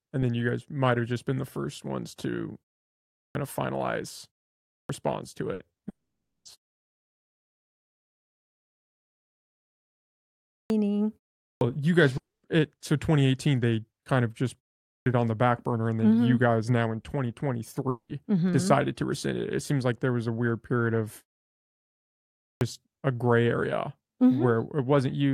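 At 3.23 s the speech returns from a pause of about 0.67 s with its onset missing, a clipped start after a pause: roughly 0.12 s is swallowed before "of finalize" while the output device wakes and locks. The same happens at 4.78 s after about 0.54 s of quiet, losing about 0.11 s. On a waveform the envelope jumps from flat to full amplitude with no rise, and on a spectrogram the first consonant's energy is absent.

At 5.53 s a burst of packet loss drops about 60 ms. The receiver stretches the last sound across the gap and fades it, so a brief held buzz or fading hiss replaces the real audio before it resumes further on. A spectrogram shows a flat, repeating pattern that dims, with a discontinuity where real speech returns.

Right behind it come two short concealed packet losses at 5.75 s (about 40 ms) and 5.81 s (about 20 ms). Each is filled by extending the preceding sound and blending back, heard as a quick smear or wobble. 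On a spectrogram they appear as short smoothed patches, and on the waveform as a slight waveform repetition.

The first long network dropout follows at 5.89 s and lasts about 0.56 s. Only a brief fading fill is heard before roughly 0.54 s of near silence, and then the speech resumes with that stretch gone. The likely cause is the network delivering nothing for that time. Similar dropouts occur at 12.17 s (about 0.26 s, mostly silent) and 17.89 s (about 0.20 s, with about 0.09 s silent). Each shows as a short decaying smear and then a blank gap across all frequencies on the spectrogram, and as a flat line on the waveform.

The clipped start returns at 10.57 s after a long pause of about 4.1 s and at 11.48 s after about 0.37 s, each cutting about 0.13 s. At 14.94 s, between "they kind of just" and "it on the back", about 0.12 s is lost after a pause of about 0.41 s. At 22.49 s, after about 1.3 s of quiet, the onset before "a gray area" is again cut by about 0.12 s.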